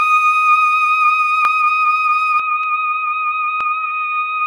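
Music, with two kinds of fault. At 1.45 s, 2.64 s and 3.61 s the sound jumps forward, losing a few milliseconds at the first and last and around 15 ms at 2.64 s. These are likely dropped buffers (overrun). The waveform shows abrupt discontinuities with no gap, and the spectrogram shows thin vertical broadband lines. From 2.40 s to the end the music turns dull and boxy, drops about 5 dB with no silence at the change, and gains a noise floor about 40 dB down. This is likely the input switching to a poorer device. On a spectrogram the upper frequencies thin out at that point, and the waveform's envelope shrinks.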